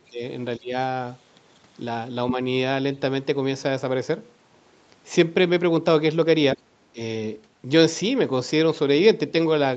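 A speech recording with short stretches where the talker is pushed down: 0.00–0.21 s (about 25 dB), 0.58–0.73 s (about 20 dB), and two brief dips at 6.55 s and 6.93 s (about 15 dB each). This is likely speech suppressed in double talk, with the echo canceller ducking the talker while the far side speaks. The audio throughout is band-limited to 8 kHz.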